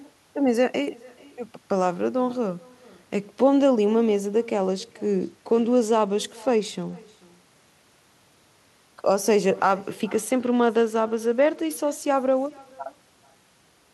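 From start to finish the speech carries an echo with no canceller. A faint copy of every phrase returns around four tenths of a second later, about 25 dB below the direct sound, and it is thinner. The far end is playing the call aloud and its microphone sends it straight back, with nothing subtracting it. A discrete delayed repeat like this is not room reverberation, which would smear continuously into the tail of each sound rather than restating it.

From 4.54 to 7.69 s, and again from 10.15 to 13.63 s, a Bluetooth SBC bit pool drop sets in. The treble dulls and a gritty, grainy noise rides on the speech. The pattern fits the encoder cutting its bit pool from about 28 to 13, near 102 kbps, so the top sub-bands starve and the rest are coarsely quantised. A plain low-pass filter would remove the treble cleanly without adding grit. The onset and full recovery both times mark this as a link rate change, not a fixed setting.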